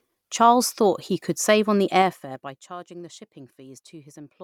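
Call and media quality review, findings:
Gain ramp applied in unsmoothed 3 dB increments, around ten steps per second, pulling speech level down roughly 20 dB. Each jump leaves a small click. Result: zipper noise, audible ticking riding the speech, 1.96 to 2.65 s. Probable component: gain stage or automatic level control lacking interpolation.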